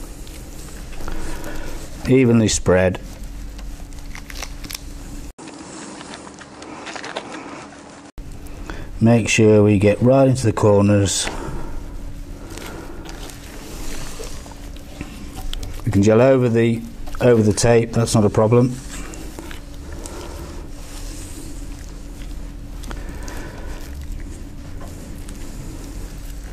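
At 5.31 s an 80 ms silence opens a dull stretch lasting to 8.18 s. Nothing passes above 10.5 kHz, the level shifts by about 5 dB, and a faint new noise floor appears. The likely cause is the input switched to a poorer device. That gap and the changed noise rule out a plain low-pass filter.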